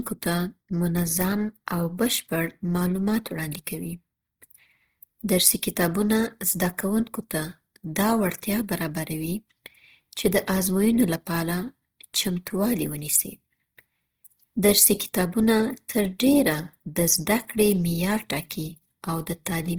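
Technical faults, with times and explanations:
Throughout, Opus compression: the speech sounds rough and grainy, with a noisy fizz in place of clean detail, though the top end still reaches about 20.4 kHz. That's likely Opus in music mode filling starved bands with noise, which fits roughly 16 kbps.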